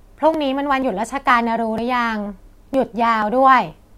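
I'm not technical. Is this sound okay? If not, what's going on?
No. The audio has small, regular skips at 0.34, 0.82, 1.30, 1.78, 2.26, 2.74 and 3.22 seconds, about every half second. At each one a sliver of roughly a fiftieth of a second is gone, and the sound on either side is butted straight together. This is audio missing between chunks, likely from a recorder working in half-second blocks and dropping a little each time it switches from one block to the next.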